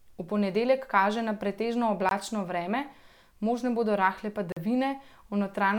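At 2.09 to 2.11 s the speech drops out abruptly for about 21 ms, heard as a short hole, and at 4.52 to 4.57 s a longer 43 ms gap sounds like a brief hole. Both are blocks of digital silence: stretches of samples set to zero, with no fade, so the sound cuts out and back abruptly. The lengths fit a 1024-sample and a 2048-sample buffer left unfilled in time.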